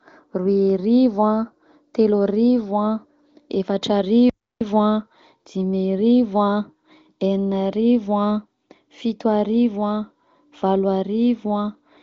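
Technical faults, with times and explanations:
4.30–4.61 s, playback stall: the speech stops dead in mid-flow and the output falls to silence for about 0.31 s, then resumes. The AMR wideband (HD Voice) band limit near 7.6 kHz is unchanged on either side. The likely cause is the player briefly running out of buffered data or its output thread being blocked, so nothing reached the device until it recovered.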